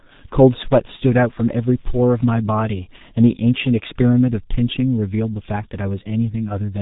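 From start to finish the speech carries heavy G.723.1 codec damage. Everything above 3.8 kHz is gone, so the voice sounds muffled and hoarse, and consonants blur because the codec refreshes its speech model only every 30 ms frame, which fits a bitrate around 6.3 kbit/s. On a spectrogram, energy stops at a flat ceiling near 3.8 kHz, with formant bands smeared into blocky steps; the waveform looks smoothed and coarse.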